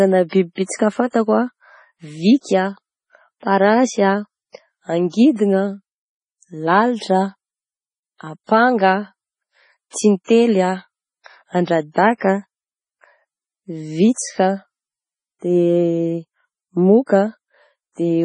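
It's a speech clip with heavy MP3 compression damage the whole way through: nothing above 10.4 kHz, and a watery, swirly quality as weak detail flickers in and out, with chirpy s sounds and smeared attacks. That's likely a low-bitrate encode, sounding like roughly 24 kbps.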